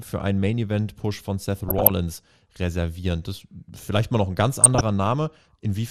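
Throughout the speech there is a dull, band-limited quality with a granular, gurgling roughness, as if the upper range switches in and out and what remains is coarsely stepped. This is most likely MP2 compression, where too few bits across the 32 sub-bands leave upper bands silenced and the rest crudely quantised. The damage is plainly audible and fits a rate around 80 kbps. Unlike burbling, it is steady and present everywhere rather than arriving in bursts.

From 1.68 to 1.90 s, and again from 4.61 to 4.81 s, DAB burbling breaks through as short bursts of noisy blips laid over the speech. Bit errors have slipped past error correction into the MP2 data, so corrupted samples put short blips of noise into single sub-bands and corrupted scale factors make sub-bands jump in level for up to a frame. The error rate behind it appears to be well under one percent, higher in the first burst. What separates it from the steady codec dullness is its sudden, localised churning, and unlike a dropout the sound never falls silent.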